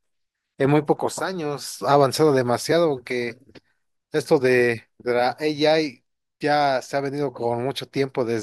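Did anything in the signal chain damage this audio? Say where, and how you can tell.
Yes. From 5.71 s to the end of the speech, there's channel delay (comb filtering). One channel runs late by roughly a single sample, about 0.02 ms, and the two get summed to mono, which points to a driver or buffer stage misaligning the channels before a downmix. With so tiny an offset, the first cancellation notch sits up around 20 kHz, so you hear a gentle dulling of the top end.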